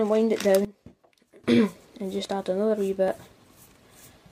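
From 0.65 to 1.44 s, one channel was likely polarity-inverted before the two channels were summed to mono. Whatever the channels shared cancelled in the sum, so for that stretch the sound drops by about 18 dB, background included. What remains is only the difference between the two channels, which can sound thinner than the surrounding audio. At 1.44 s the full level returns as the correct polarity resumes.

At 3.08 s the time stamps of two consecutive stream segments overlap. The player treats that span as a duplicate and trims it away, although the sound there was never repeated. About 33 ms of real audio is lost between 3.08 and 3.12 s, and the waveform jumps straight from one point to a later one. It is heard as a small skip where the sound briefly leaps forward.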